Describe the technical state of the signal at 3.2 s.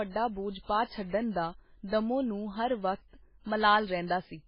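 At 3.2 s the speech carries heavy MP3 compression damage, present across the whole clip, with a very low bitrate, around 16 kbps, the likely cause. Short of bits, the encoder cuts the treble off at a fixed point, so nothing is heard above about 5.3 kHz, and it zeroes weak frequency lines that flicker on and off between frames. The result is a muffled, watery, swirling sound with smeared consonant onsets and metallic chirping on s sounds.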